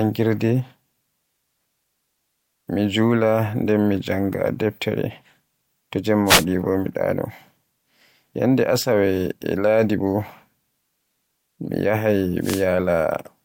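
Wireless microphone noise hits occur at 6.25 to 6.45 s, just before "bo mi ɗaano", and again at 12.41 to 12.65 s in this speech clip. Each is a brief burst of static, lasting about 0.2 s and 0.24 s. The analogue FM radio link momentarily lost signal strength as reflected paths cancelled the direct one, so receiver noise rose before the signal recovered.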